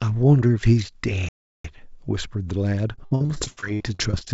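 A playback stall cuts into this speech at 1.29 s. The sound stops mid-flow and stays silent for about 0.36 s until 1.64 s, then carries on, likely because the player ran out of buffered data or its thread was blocked for that long. Repeated packet loss (robotic sound) sets in at 2.96 s and continues to the end. Packets keep going missing, each gap is bridged by stretching the last bit of sound, and the next gap follows quickly, leaving choppy, robotic audio with pieces dropped out. Both faults sit on top of a call-codec sound with nothing above 8 kHz, which fits G.722 at 64 kbps.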